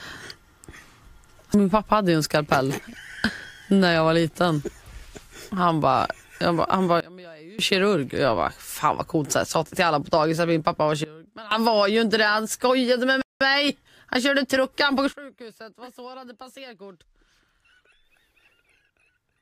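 Sudden gain jumps drop the audio by about 24 dB at 7.00–7.59 s, about 20 dB at 11.04–11.51 s, and about 19 dB from 15.13 s to the end. Signal and noise floor fall together instantly, with no fade or compressor-style pumping, likely from a gain change applied without a ramp.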